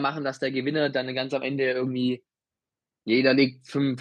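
From 0.12 s to 2.23 s, automatic gain rising: the AGC judged the input too quiet and lifted gain about 6 dB, so voice and background swell together.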